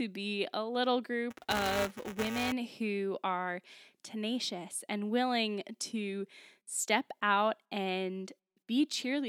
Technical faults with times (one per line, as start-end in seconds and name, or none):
1.30-2.52 buffer tearing